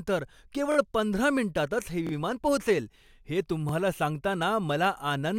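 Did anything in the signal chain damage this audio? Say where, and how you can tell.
Yes, at the driver or buffer stage: a repeated buffer stutters at 0.72–0.77 s before "पंधरा मिनिटांतच हे", at 2.07–2.11 s before "पोहोचेल हे", and at 3.69–3.72 s after it. A 23 ms slice, fitting a 1024-sample buffer, replays with hard joins. A waveform shows identical copied blocks, and a spectrogram shows vertical click lines at each seam.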